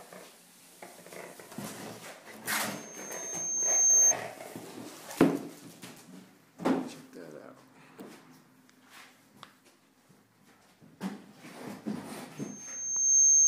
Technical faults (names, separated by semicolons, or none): loudspeaker feedback squeal